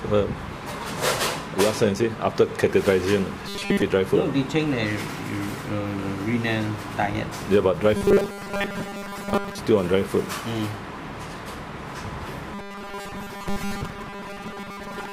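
From 3.48 to 3.82 s, 7.97 to 9.59 s and 12.54 s to the end, the sound turns into a rigid, metallic buzz. This is robotic sound from repeated short buffers. The buzz sits at 200 Hz, which points to a 5 ms chunk being looped. Most of the audio in these spans is repeated material rather than new signal. The likely cause is audio arriving too seldom, with the gaps filled by replaying the last buffer.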